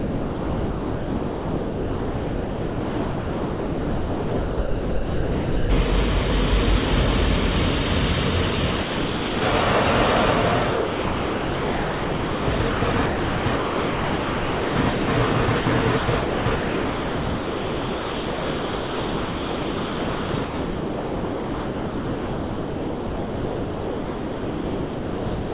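From the start to 5.7 s, and again from 8.80 to 9.42 s, the sound is dropped by the voice detector, likely because the sender judged it to be background. Each stretch becomes one unbroken patch of steady comfort noise, and the real sound returns once.

From 10.72 to 15.08 s, 15.46 to 15.66 s, and 15.98 to 25.52 s, the sound is chopped by the voice detector. The detector likely toggled repeatedly instead of closing once, so fragments of real sound alternate with synthetic noise. That flickering, not a single gap, is what marks it. About 3.7 s, 80 ms and 9.2 s of the sound are replaced in those three spans. The sound and the fill are both limited to 4 kHz by the call path.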